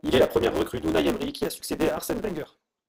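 Throughout, a block size mismatch (truncated) discards each block's end, fitting 512-sample writes, adding a 150 Hz buzz and speeding speech 1.6 times with its timbre intact.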